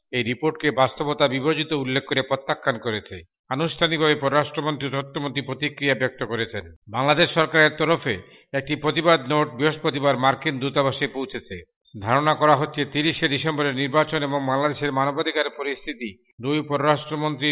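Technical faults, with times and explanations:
No technical faults are audible.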